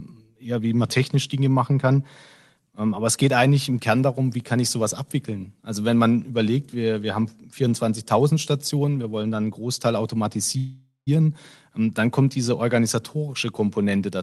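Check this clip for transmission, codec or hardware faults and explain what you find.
There is one transmission fault in this speech clip.

A call audio freeze runs from 10.57 to 11.09 s. Packets were likely delayed in transit, so the jitter buffer ran dry and the receiver had nothing new to play. For about half a second it stretches the last sound into a fading buzz or hiss, ending in roughly 0.15 s of silence. When the packets arrive, the speech picks up exactly where it stopped. Nothing is lost, but everything after this point plays about 0.49 s later than it should. The speech carries the coding texture and 12 kHz top end that point to Opus on a call link.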